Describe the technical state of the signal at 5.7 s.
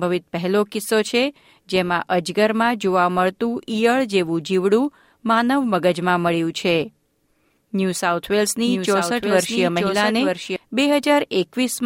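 At 5.7 s the signal is intact, with no dropout, distortion, glitch or other fault at that moment.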